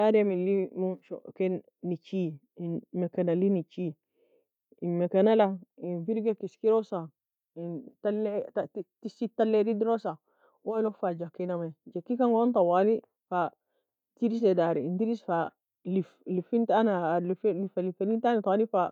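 Nothing in the speech stood out as a technical problem on listening.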